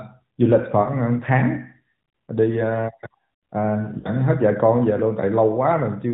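At 0.82 to 0.90 s and again at 4.00 to 4.09 s there are lost AMR speech frames. Each gap is about 40 ms, which points to two 20 ms frames failing their checksum. The decoder papers over them by repeating the last good pitch and vocal tract settings at dropping gain, so you hear a short smeared, warbly dip before the speech comes back a touch weak. All of this sits inside the AMR narrowband band, with nothing above 4 kHz.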